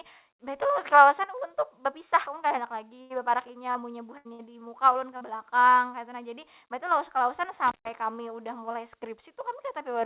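Short concealed packet loss first appears at 2.24 and 2.48 s: about 20 ms of speech arrived too late, and the receiver's continuation of the last sound leaves a brief smear or wobble. A burst of packet loss at 3.02 s follows, about 80 ms lost in a row. The decoder extends and fades the preceding sound into a held buzz or hiss, then resumes with that stretch gone. Another short concealed loss at 3.72 s briefly smears, with a sliver of audio dropped as playback catches up. Two more bursts come close together at 4.17 s (80 ms missing) and 4.33 s (60 ms), each a fading continuation followed by a jump ahead. Short concealed losses return at 4.93 s (20 ms) and 5.17 s (40 ms). From 7.68 to 7.89 s, an intermittent contact, a loose plug or cable, opens for about 140 ms. The speech cuts out between crackles, leaving faint hiss. Throughout, the call path passes nothing above 4 kHz, which fits narrowband G.711 mu-law at 64 kbps.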